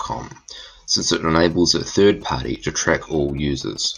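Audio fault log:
0.58 s and 2.56 s: overlap between stream segments. Two segments claimed the same stretch of time, and the player discarded the doubled part. But that audio was never actually repeated, so real speech went missing: about 18 ms at the first point and about 6 ms at the second. The waveform jumps across each gap, which is heard as a small click or skip. The spacing fits segments about 2 s long.
1.27 to 3.86 s: GSM signalling bursts. A nearby 2G phone was signalling the network, sending short groups of radio bursts rather than a steady transmission. Something in the audio circuit rectified that radio energy into sound. The result is a galloping dit-dit-dit of ticks and brief buzzes pulsing at about 217 Hz. It sits roughly 25 dB below the speech and runs under it for over two and a half seconds.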